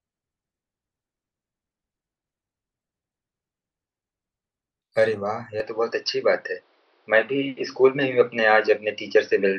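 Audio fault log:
5.6–9.6 s, input switched to a poorer device: without any gap, the speech suddenly loses everything above 5.9 kHz, shifts in level by about 5 dB and picks up a faint new background noise about 40 dB down, likely from a narrower-band microphone taking over.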